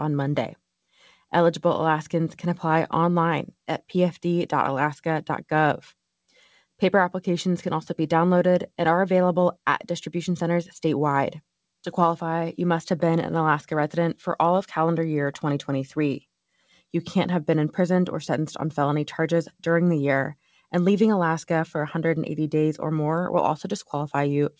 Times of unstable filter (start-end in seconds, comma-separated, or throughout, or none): none